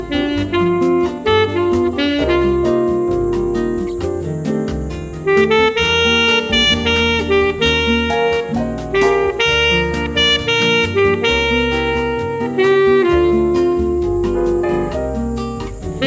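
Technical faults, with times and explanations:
Nothing in the audio here stands out as a technical fault worth flagging.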